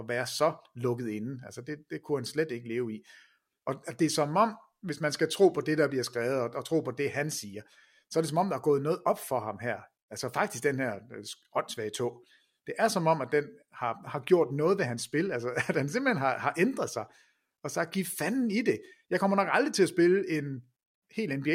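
Speech recording; no technical faults can be heard.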